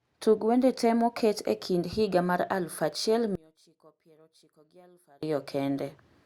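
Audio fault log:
3.35 to 5.23 s, one channel inverted: the speech abruptly collapses by about 30 dB, leaving only a faint trace. The likely cause is one stereo channel flipped in polarity, so when the two sides are summed to mono, everything they share, including the centred speech and its low end, cancels almost completely. What survives is the small difference between channels, heard until full level returns.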